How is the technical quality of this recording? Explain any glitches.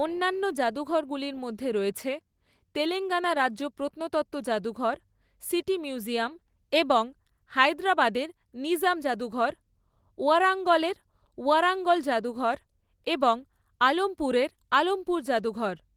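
Nothing here sounds like a glitch; the speech comes through the light Opus voice coding with its full bandwidth intact, with no dropouts, clicks or other faults to point to.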